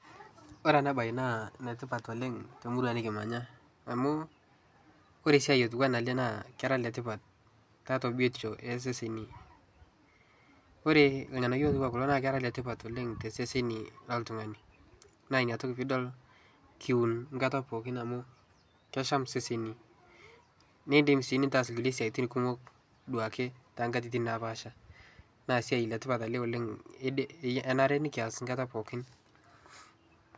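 No technical faults can be heard anywhere in it.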